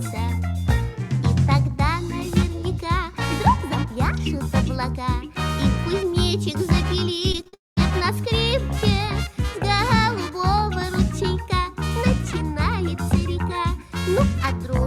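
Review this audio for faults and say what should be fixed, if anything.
From 7.32 to 7.54 s there is repeated packet loss (robotic sound): five short holes, the longest 44 ms, with about 100 ms of audio missing. The receiver patched each hole by extending the preceding sound, so concealment covers 44% of this span and it turns choppy. Unlike a single long dropout, the sound keeps returning between holes, giving a stuttering texture rather than one clean break.

From 7.54 to 7.78 s the audio stops arriving for about 230 ms. A brief smeared continuation of the last sound gives way to roughly 180 ms of silence, and the sound then resumes with that stretch gone. This is most likely a long network dropout. What sets it apart from the packet loss just before it is the single unbroken gap that decays to silence instead of a run of small patched holes.

A larger adaptive jitter buffer with forward error correction or redundancy, plus a more stable network path, would prevent both faults.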